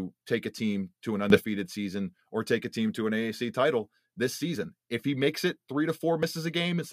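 Right after "a team to an", at 1.30 s, there's a sudden gain jump of about 12 dB, likely an unramped gain change, lifting voice and background together until 1.44 s.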